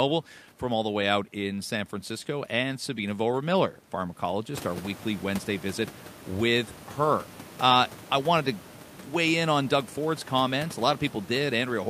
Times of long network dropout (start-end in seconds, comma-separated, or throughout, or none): none